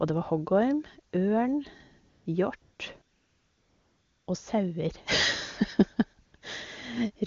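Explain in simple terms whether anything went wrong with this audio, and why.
AMR comfort noise kicks in at 2.09–2.25, 2.61–2.79, 3.01–4.27, 6.25–6.33 and 6.37–6.41 s. The phone decided nobody was talking, stopped sending sound, and filled the gaps with smooth fake hiss.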